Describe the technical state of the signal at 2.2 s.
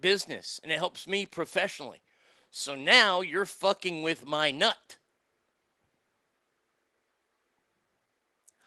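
At 2.2 s the speech is intact, with no dropout, glitch or distortion, just the ordinary coding of the Opus call path and its top end limited to about 12 kHz.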